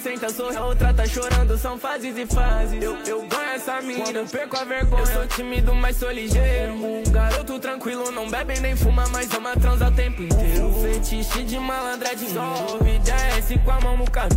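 Compressed frames skipped at 0.54 to 0.57 s: a handful of frames drop out, so roughly a fifth of a second vanishes and the audio jumps ahead.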